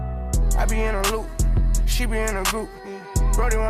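No technical fault can be heard anywhere in this audio. Nothing in it calls for correction or explanation.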